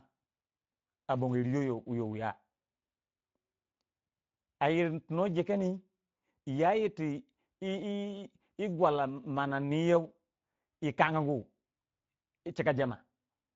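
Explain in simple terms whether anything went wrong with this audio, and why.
From start to finish the speech sounds rough and hoarse, with a grainy, noisy edge and a dull top end, since nothing above about 7.7 kHz comes through. The cause is the Speex codec, an older speech compressor used in internet calls and game chat. It keeps the basic shape of speech but spends too few bits on its fine texture, so detail is replaced by a rougher approximation that is plainly audible here.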